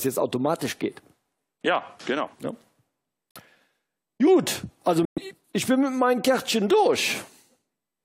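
At 3.31 s the audio drops to abrupt silence for 64 ms, and again at 5.05 s for 130 ms: corrupt frame muted. Damaged compressed frames failed decoding and were replaced with silence, which points to roughly two and five lost frames, with timing preserved.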